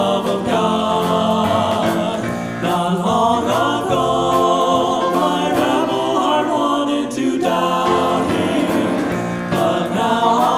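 No audible technical faults anywhere in the clip.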